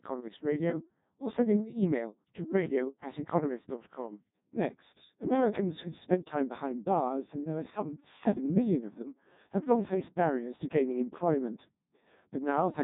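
Speech here runs through the Codec 2 vocoder for its whole length: the voice sounds robotic and buzzy, with heavy damage that fits a very low rate around 1.2 kbit/s. The decoder rebuilds each frame from sine waves driven by pitch, voicing and a coarse envelope, so the original waveform is gone. On a spectrogram, harmonics look evenly combed and smeared, with nothing above 3.8 kHz; the waveform shows regular synthetic pulses instead of natural detail.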